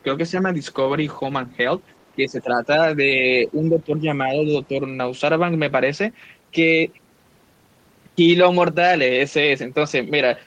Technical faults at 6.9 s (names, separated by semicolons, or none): none